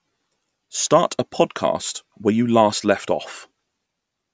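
Speech recording with no audible technical faults.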